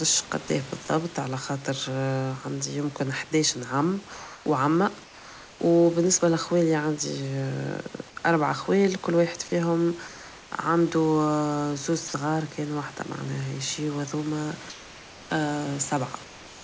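Right at the start, from 0.48 to 0.50 s, a tiny sliver of the sound vanishes and is replaced by a flat hiss. That's sound dropped by the voice detector: the sender likely judged that bit to be background and stopped transmitting, so the receiver filled in synthetic noise. It happens again from 12.08 to 12.14 s, a longer 60 ms gap where the sound just cuts to steady noise before picking back up.

In between the sound, there's comfort noise in place of the background at 4.14–4.46 s, 5.04–5.60 s, 10.08–10.52 s, 14.70–15.30 s, and from 16.24 s to the end. During these pauses the sender likely went into discontinuous transmission, and the receiver generated a smooth, featureless noise roughly matched to the room. The real background sits about 20 to 23 dB below the loud parts. The fill matches its level in the first pause and runs about 2 to 3 dB quieter in the others, so the room seems to go slightly dead and flat each time. 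All of this rides on a G.722 call path that carries nothing above 8 kHz.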